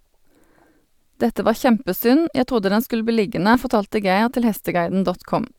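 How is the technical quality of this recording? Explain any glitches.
The recording has two small dropouts where compressed frames were skipped. At 3.54 s the audio jumps ahead by roughly 50 ms, and at 4.91 s by roughly 20 ms. Both skips are consistent with whole frames missing or being rejected by the decoder, and their sizes fit 10 ms frames (about five lost in the first, about two in the second). At each join the speech jumps ahead by the length of the frames left out.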